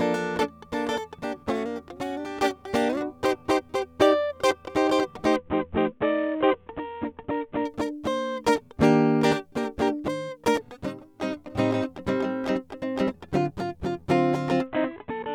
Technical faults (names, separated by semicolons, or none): Bluetooth SBC bit pool drop